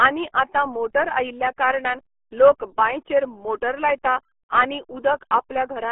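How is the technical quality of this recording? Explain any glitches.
Poor quality throughout: the whole clip has passed through the RealAudio 14.4 codec. The speech was forced into a dial-up-era codec, at a rate that fits 8 kbit/s, and limited to a 300 Hz to 3.4 kHz band. Nothing above 3.8 kHz survives, and heavy coding damage leaves the speech muffled and gargly from start to finish.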